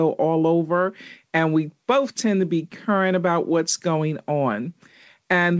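No technical faults can be heard anywhere in the speech. It has come through a working call path, and nothing is present above 8 kHz, which fits a wideband call codec such as G.722 at 64 kbps.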